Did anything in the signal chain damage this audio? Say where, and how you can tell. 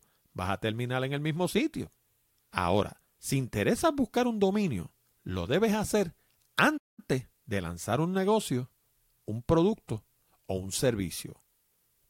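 Yes, a playback stall: the speech drops to silence from 6.77 to 7.00 s, 204 ms, then carries on, likely the player running out of data.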